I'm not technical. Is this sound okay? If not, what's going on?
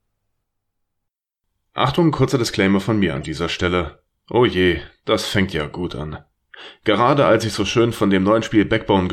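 No. Right after "von mir", from 3.16 to 3.26 s, there's a brief chirpy burst of noise. That's a corrupt frame decoded: a few compressed chunks of audio got damaged bits, and the player played them anyway, putting sound at the wrong pitches.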